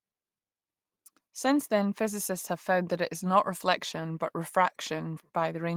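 No technical faults are audible in this speech.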